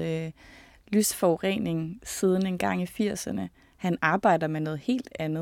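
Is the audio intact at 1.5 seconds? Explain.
Yes, the speech at 1.5 seconds plays through intact, with no dropout, click, distortion or other fault at that point.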